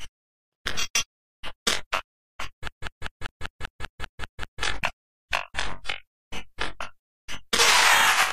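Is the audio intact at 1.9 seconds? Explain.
Yes, the audio is intact at 1.9 seconds, with no dropout, click, distortion or other fault at that point.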